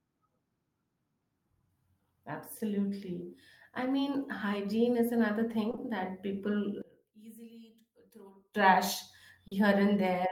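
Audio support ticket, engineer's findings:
Short concealed packet loss, 5.71 to 5.79 s, just after "mean hygiene is another": two back-to-back 20 ms gaps, decoder extrapolated the last sound, brief smear. Again at 9.47 to 9.53 s, 40 ms fill.

One channel inverted, 6.82 to 8.55 s: speech drops about 25 dB, faint residue only. Likely one channel polarity-flipped upstream, centred content cancelling when summed to mono.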